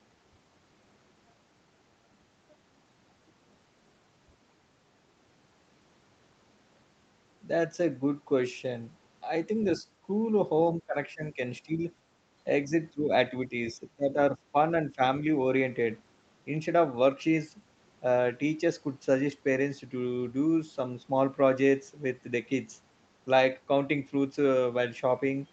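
Speech suppressed in double talk at 9.79–9.85, 10.79–11.89, 12.45–14.56 and 14.95–15.27 s: the speech dips and breaks up in patches, about 10 dB down at first, then around 15 dB, likely because an echo canceller mistook overlapping far-end talk for echo and attenuated both.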